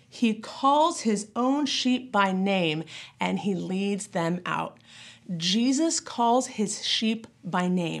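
No dropouts, clicks, distortion or other faults can be heard anywhere in the speech signal.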